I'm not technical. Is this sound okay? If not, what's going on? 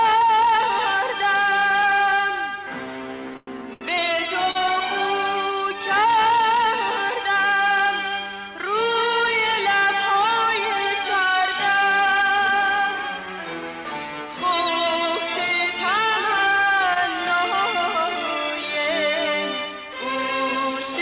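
No. At 3.37 to 3.49 s there is a call audio freeze: the sound hangs as a fading buzz for about a tenth of a second, likely because packets were held up, then resumes without losing anything.

Two shorter versions follow, each a short stall from a late packet, at 3.73 to 3.83 s and 4.51 to 4.57 s. A sound is held slightly too long, then continues from the same place.

At 16.94 to 16.97 s, short concealed packet loss briefly smears the sound. Unlike the stalls, a sliver of audio is actually gone and patched over rather than just delayed.

From 18.62 to 20.91 s, a jitter buffer speed-up makes the audio run about 5% faster at the same pitch, trimming roughly a tenth of a second overall so it sounds slightly hurried.

Throughout, the sound has the narrow, telephone-like quality of a call line, with nothing above 4 kHz.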